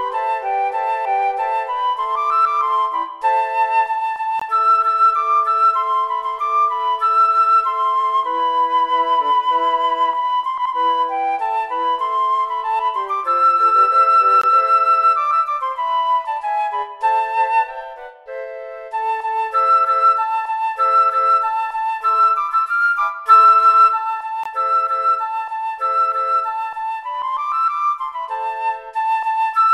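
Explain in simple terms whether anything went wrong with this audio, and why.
The sound cuts out briefly three times, at 4.40 s, 14.42 s and 24.44 s, each a clean 20 ms hole with sharp edges. This is a gap between chunks: the audio was handled in 10-second pieces, and a little silence slipped in at each join.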